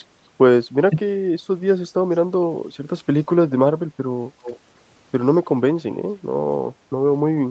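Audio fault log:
0.90–0.97 s, speech suppressed in double talk: likely the echo canceller mistook overlapping talk for echo and turned it down, so the speech dips by about 10 dB for roughly 70 ms.
2.13–2.17 s and 4.43–4.59 s, echo leak: likely the far end's echo canceller let loudspeaker pickup through, returning a delayed copy at 260 ms, then 292 ms. The first is a faint scrap about 40 dB down; the second is plainly audible, about 15 dB below the speech.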